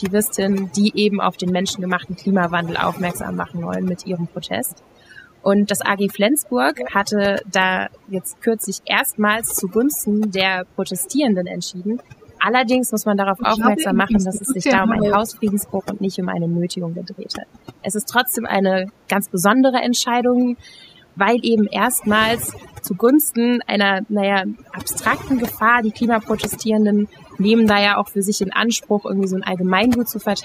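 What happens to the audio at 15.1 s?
At 15.1 s the voice is in the last moments of a dip that runs from 13.3 to 15.15 s. Through that stretch it sinks, at worst by about 20 dB, loses its top end and drops out in fragments, for about a second and a half in total. This is speech suppressed in double talk. The likely cause is an echo canceller that heard both sides talking at once, could not tell the near talker from the loudspeaker echo, and turned everything down.

Laid over this, as across the whole recording, is overdone noise removal. The background drops and breaks up into twinkling specks. A noise reducer set too strong is cutting individual frequency bands whenever they come close to its noise estimate, and the quieter parts of the voice are removed along with the noise.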